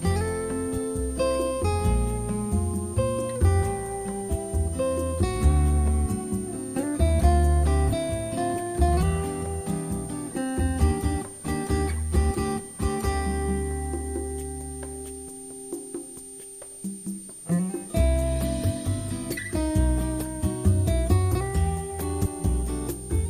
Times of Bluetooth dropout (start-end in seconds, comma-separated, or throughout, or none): none